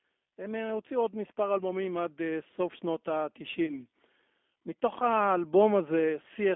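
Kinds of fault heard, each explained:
G.729 codec: The speech is narrow and noticeably rough and synthetic, confined to roughly 200 Hz to 3.5 kHz. This fits the 8 kbit/s G.729 codec, which rebuilds each short frame from a vocal tract filter, a pitch estimate and a few pulses rather than the actual waveform.
Automatic gain rising: From 0.35 s to 3.91 s the voice and the background swell together, ending about 8 dB louder. Automatic gain control judged the input too quiet and raised its gain gradually instead of in a single step.
VoIP packet loss concealed by the speech codec: Between 3.66 s and 3.80 s the speech is briefly stretched into a fading buzzy tone or coloured noise, then stays weak for a while. About 20 ms of audio was missing, which fits one lost packet. The decoder filled the gap from its previous frames, and that error carried forward after audio resumed.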